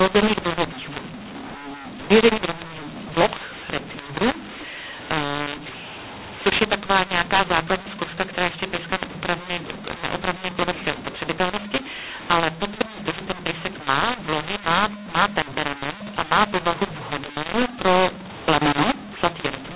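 From start to finish the speech has mu-law and A-law mixed up: samples coded as mu-law are read back as A-law, so levels are scrambled. It sounds harsh and gritty, pauses hiss, and the waveform shows distorted peaks with a raised noise floor filling gaps below 4 kHz.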